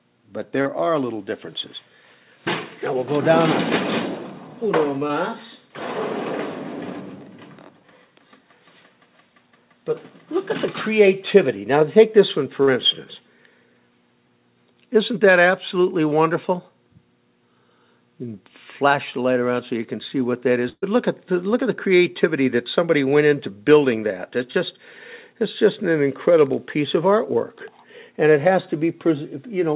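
Brief smears or wobbles are heard at 0.62 to 0.67 s, 5.07 to 5.11 s, 12.63 to 12.69 s and 24.52 to 24.56 s. These are short concealed packet losses. Between 20 and 40 ms of audio failed to arrive in time, and the receiver covered each hole by continuing the last sound before blending back in.

From 20.69 to 20.89 s the sound stretches into a held buzz or fading hiss and drops out for about 30 ms. It then resumes further on. This is a burst of packet loss: about 120 ms of audio is missing, and roughly 128 ms of concealment fills the gap.

Throughout, nothing is heard above 4 kHz, which fits a narrowband call codec such as G.711 A-law.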